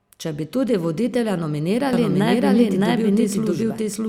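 A speech recording with a doubled audio track from 1.93 s to the end: a second full-band copy, about as loud as the original, trails it by roughly 0.7 s. Unlike room echo or reverb, it never decays, adds no room colour and begins abruptly, which likely points to a second, slower capture path or an edit layering two out-of-step copies.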